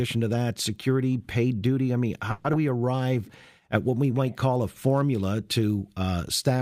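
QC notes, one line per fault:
2.31–2.46 s, call audio freeze: the sound stalls and the last bit is stretched out as a fading buzz or hiss for about 130 ms, with no silence, then carries on where it stopped. Likely packets got held up and the jitter buffer ran dry, so nothing's lost, just a gap.
2.52–2.55 s, skip ahead: playback jumps forward, with roughly 70 ms of audio gone and only about 10 ms bridging the join. A chunk was dropped, in transit or by an overfull jitter buffer, while later audio was already queued, so the two sides butt together.
2.78–3.23 s, jitter buffer slow-down: this stretch plays at 87% speed with pitch unchanged, adding 66 ms, so sounds come out drawn-out. The receiver repeated single pitch periods or snippets of pauses to rebuild its reserve, because the buffer was low or had just raised its target delay.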